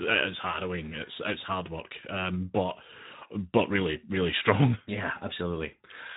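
The Speex codec runs through the whole clip, and its damage is plainly audible. Speex is a CELP coder that models speech as a filter driven by a coded excitation. At the coarseness heard here, which fits a setting around 11 kbps, that excitation is coded with few bits. The speech comes out grainy and hoarse, and any content above 8 kHz is only a shaped, noise-like fill.

VoIP packet loss concealed by the speech codec occurs from 0.51 to 0.58 s. The gap suggests a single lost 20 ms packet. With nothing arriving, the decoder kept repeating its last pitch and filter at falling gain, so the sound briefly smears into a buzzy tone or coloured noise that fades. Because each decoded frame builds on the one before, the speech stays weak or distorted for a few tens of milliseconds after packets resume, until about 0.58 s.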